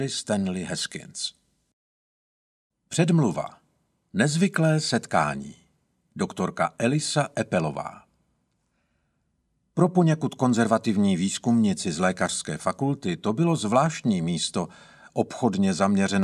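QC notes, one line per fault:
0.71 to 15.51 s, clock drift buffer slips: a mismatch of around 100 ppm between two device clocks likely lets the buffer between them creep full or empty until a handful of samples is dropped or repeated to catch up. Each correction breaks the waveform's continuity, so a click or pop recurs about every 1.64 s, roughly ten in all across this span, at a steady rhythm wherever sound is present.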